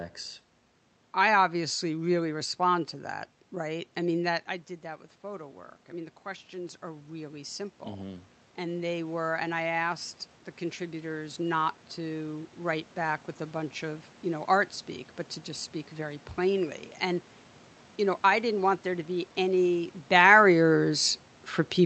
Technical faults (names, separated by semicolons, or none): automatic gain rising